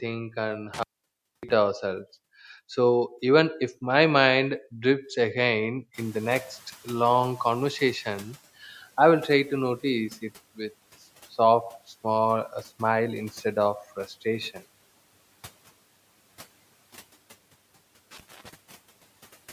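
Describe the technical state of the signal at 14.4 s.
At 14.4 s the signal is intact, with the room's background noise sitting about 28 dB below the speech as part of the recording itself.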